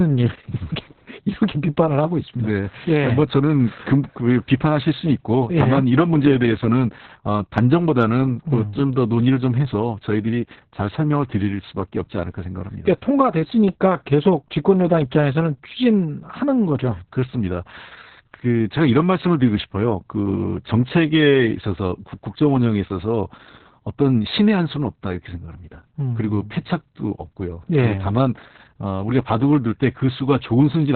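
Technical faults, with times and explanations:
Throughout, Opus voice compression: muffled, hoarse, slightly robotic speech with nothing above 4.4 kHz, pointing to narrowband SILK coding near 6 kbps with coarse excitation.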